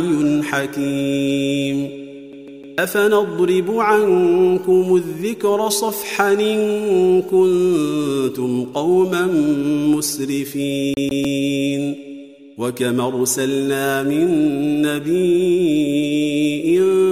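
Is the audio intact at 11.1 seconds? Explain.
No. From 10.94 to 11.25 s the same 0.15 s of sound plays twice, with a brief mute at each jump, a quick, even stutter. This is a CD stuck on one turn: a scratch kicks the laser back one track at the same spot every rotation.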